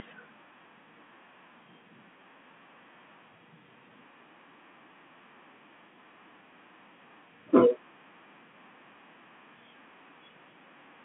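No technical faults occur anywhere in the speech, so there are none to describe in time order.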